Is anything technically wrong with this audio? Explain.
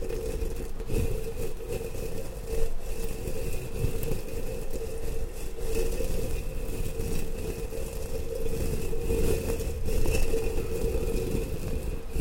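Yes. At 11.68 s there is damaged data in the compressed stream: a short run of the encoded bytes is corrupted, so the decoder cannot read the frame there correctly and loses its place, hunting for the next valid frame header before it can carry on. What comes out at that instant is a brief chirp, squawk, click or short hole that does not belong to the surrounding sound, before normal decoding resumes.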